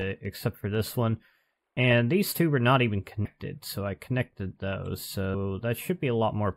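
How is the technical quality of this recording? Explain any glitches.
The recording has two problems: comb filtering across the whole clip and two jumps where compressed frames were skipped.

Channel delay (comb filtering) runs throughout. One channel arrives a tiny fraction of a millisecond late, which fits a lag of a few samples. When the channels are summed to mono, the shared content cancels at evenly spaced frequencies, starting around 7 kHz. The top end sounds dulled and slightly phasey. A spectrogram shows a steady dark horizontal notch band near 7 kHz that never moves.

Compressed frames skipped occurs at 3.24 s and again at 5.33 s. Whole blocks of the encoded audio were never played, so the sound lurches forward, losing roughly 150 ms the first time and roughly 200 ms the second. That fits several 21.3 ms frames each time. The waveform shows a sudden discontinuity in the envelope, and the spectrogram a short vertical smear.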